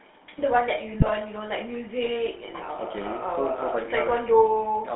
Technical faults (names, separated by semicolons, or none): GSM full-rate codec; GSM bit errors